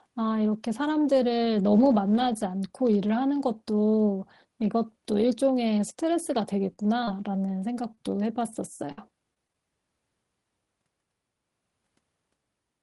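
A speech recording in which a lost packet rebuilt from error correction appears at 5.89 s: a 10 ms frame was replaced by the low-bitrate redundant copy carried in the following packet, so there is no dropout, only a brief patch of rougher, noisier sound. From 6.73 to 9.55 s come scattered short gaps. Around ten separate packets arrived late or not at all, the longest hole roughly 50 ms, and the receiver bridged each by extending the preceding sound. This concealment covers about 7% of that stretch and is heard as small ticks, smears and hiccups.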